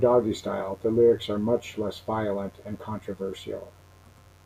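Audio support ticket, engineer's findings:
Mains buzz throughout the speech. Steady raspy buzz, 50 Hz harmonics into the kilohertz range, well below the voice. Likely dimmer, rectifier or unshielded cable injecting switching spikes.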